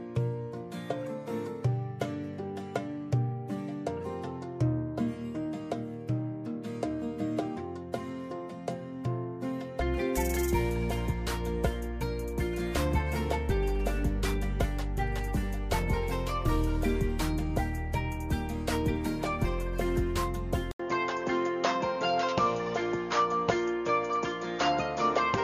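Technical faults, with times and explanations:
20.72–25.44 s, input switched to a poorer device: after a brief dropout of about 80 ms, the sound turns duller and boxier through to the end, with nothing above 6.9 kHz, a faint new background noise well below the signal, and no noticeable change in loudness. The cause is likely a change of input device mid-recording. On a spectrogram the upper band cuts off sharply at the switch; the waveform shows a short flat gap.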